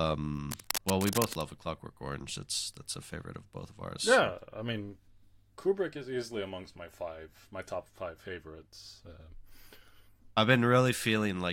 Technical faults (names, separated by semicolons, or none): cable scratch noise